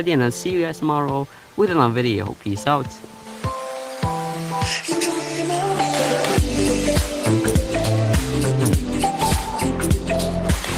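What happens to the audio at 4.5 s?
Nothing goes wrong at 4.5 s: the audio runs straight through that moment intact, with no dropout, click or other fault to be heard.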